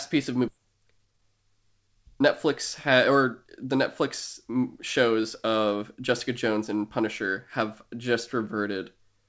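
At 0.48 s, just after "piece of", a skip ahead drops about a second of speech, splicing the two sides together with no silence, unlike a dropout's audible gap. From 0.57 to 3.77 s, a jitter buffer speed-up trims pitch periods so speech runs at 112% speed, roughly 400 ms removed, hurried yet unchanged in pitch, with band-limiting at 8 kHz from the G.722 call path.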